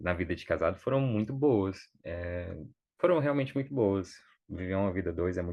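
No technical faults can be heard in this speech recording, so there is nothing to describe in time order.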